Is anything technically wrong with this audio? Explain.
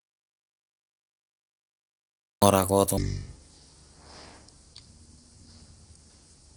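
Yes, there are two faults. The speech opens in dead silence that is already under way when playback starts and lasts until 2.42 s. There is no room tone at all. This is an audio dropout to silence. The likely cause is that the input was lost through a disconnected device, a failed link or a mute while the recorder kept writing silence, so whatever happened during that stretch is gone.

From 2.97 s to the end of the clip, the speech comes out slow and deep, dragging at half its normal pace. Its pitch sits roughly ten semitones lower, and speed and pitch fall together. This is a section at the wrong speed, with the speed at 0.5 times. The likely cause is that this part was played against the wrong clock, stretching its timing and lowering its pitch at once. Light Opus voice compression runs across the clip.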